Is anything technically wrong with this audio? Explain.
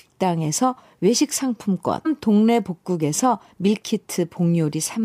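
Yes. At about 2.05 s the speech jumps abruptly forward with a brief blip, so the flow breaks and resumes at a different point. This is most likely a stream segment skipped: one chunk of a segmented stream failed to arrive and the player carried on with the next. On a waveform the envelope changes suddenly at a hard seam with a tiny spike. On a spectrogram a thin vertical broadband line marks the splice, with harmonic tracks discontinuous on either side.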